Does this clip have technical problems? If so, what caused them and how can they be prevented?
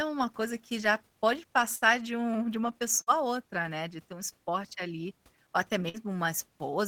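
Yes, there are bursts of packet loss at 1.75–1.84, 3.01–3.10 and 5.89–5.97 s. Each time, about 50–58 ms of the last speech is stretched and faded, showing on a spectrogram as smeared, held bands, and then about 60 ms is skipped. Larger jitter buffers and forward error correction on the network link would prevent these gaps.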